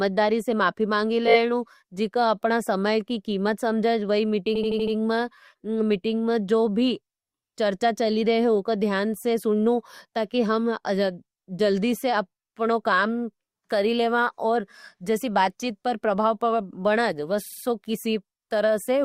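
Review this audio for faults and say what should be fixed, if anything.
The speech stutters from repeated frames at 1.27–1.38 s, 4.55–4.95 s and 17.45–17.63 s. A short block of compressed data is decoded again and again: a 20 ms segment plays four extra times, an 80 ms segment five extra times, and a 60 ms segment three extra times. The clip runs about 0.66 s longer overall. To prevent it, de-duplicate frames by sequence number or timestamp before decoding.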